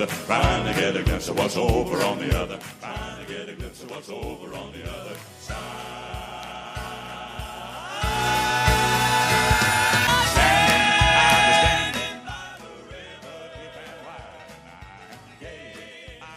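No technical faults are audible.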